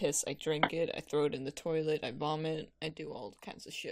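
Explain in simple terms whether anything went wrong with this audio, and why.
At 2.90 s the whole sound, background hiss included, abruptly drops to a noticeably quieter level and stays there to the end. This is a sudden gain jump, likely from a volume setting applied instantly rather than faded in gradually.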